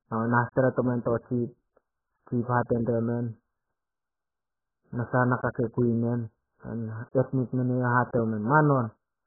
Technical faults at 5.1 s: AAC compression

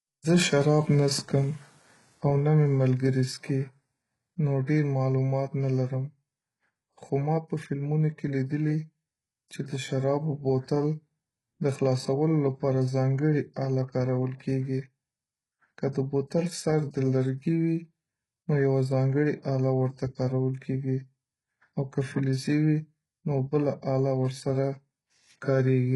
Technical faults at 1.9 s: HE-AAC compression

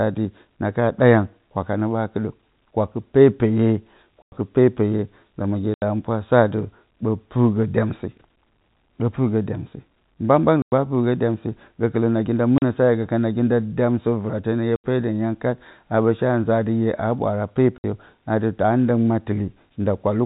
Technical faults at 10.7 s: packet loss filled with silence

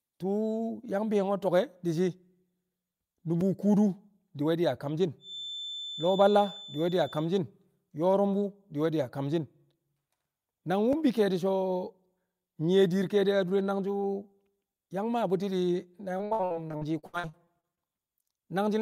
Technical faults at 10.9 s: block of digital silence

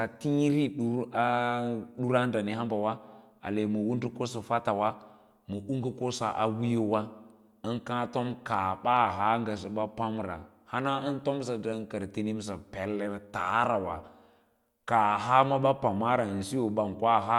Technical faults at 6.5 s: none

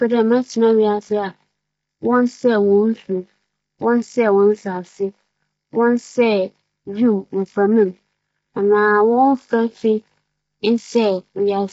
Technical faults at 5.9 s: low-delay AAC compression

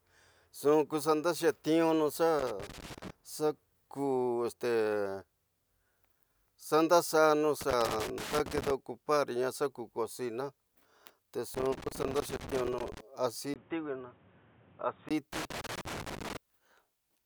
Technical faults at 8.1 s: loose connector crackle

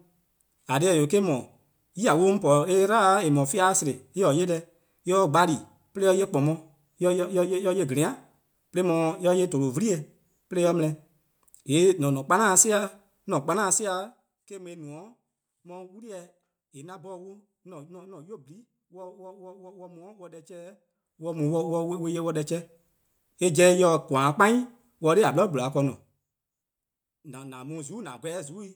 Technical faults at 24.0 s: none

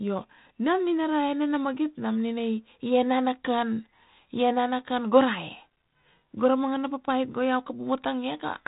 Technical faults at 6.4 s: none

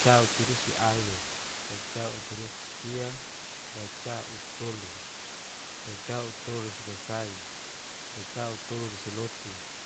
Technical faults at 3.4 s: low bit depth with dither

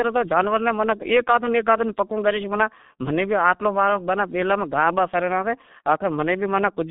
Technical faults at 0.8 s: G.723.1 codec

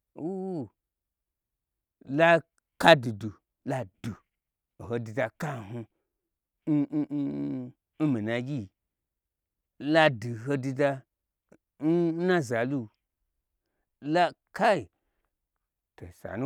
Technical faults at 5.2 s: none

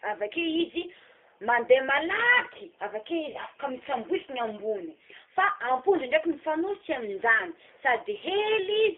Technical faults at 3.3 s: G.729 codec; VoIP packet loss concealed by the speech codec

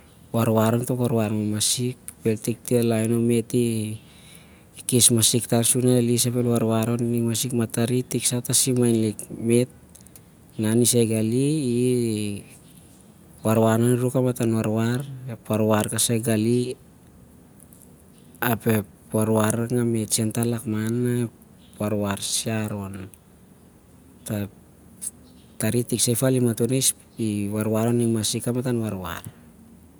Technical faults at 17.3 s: none

